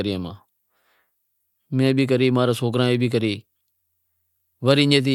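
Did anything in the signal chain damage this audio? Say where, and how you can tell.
No, nothing along the way seems to have damaged this speech, and there's no stage in the chain I'd point a finger at.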